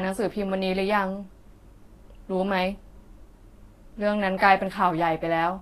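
Throughout the speech, nothing reaches above about 14.1 kHz, and the treble turns hissy and grainy with smeared consonant attacks, plainly audible damage from likely Vorbis compression at a low bitrate around 32 kbps.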